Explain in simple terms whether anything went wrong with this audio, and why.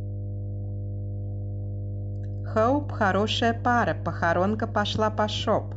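Yes, there is a problem: mains hum runs under the speech from the very start to the end. It is a steady low tone at 50 Hz, picked up from the electricity supply, typically through a ground loop or a transformer close to the cables. It is fairly loud, not far below the speech. Unlike wind or handling rumble, which rises and falls, this hum holds one fixed pitch and never changes, even in pauses.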